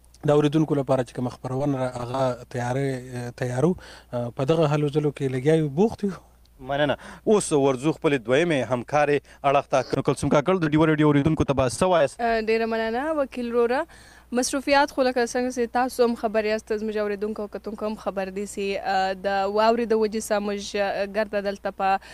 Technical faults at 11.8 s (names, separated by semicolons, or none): short concealed packet loss